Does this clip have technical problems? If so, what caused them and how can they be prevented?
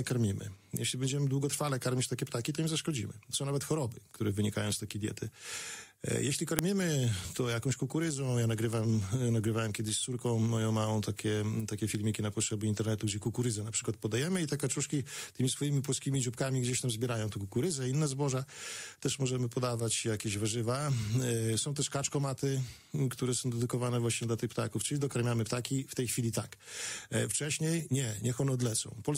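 Yes. A file header played as audio causes a sharp, loud click at 6.59 s. Where two WAV pieces were joined, header bytes were read as samples. Unlike a splice discontinuity, the snap comes from non-audio data and doesn't depend on the waveform. Stripping headers before concatenating or streaming prevents it.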